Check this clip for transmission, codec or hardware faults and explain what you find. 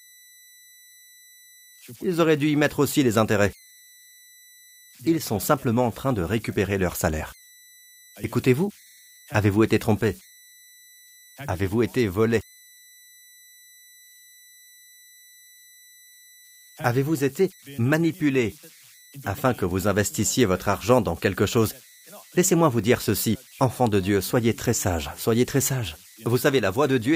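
Converter idle tones run through the whole clip, a whistle around 2 kHz sitting about 29 dB below the speech. The undithered delta-sigma converter settles into repeating bit patterns at low levels, so the tone shows in pauses and as grainy noise under quiet passages.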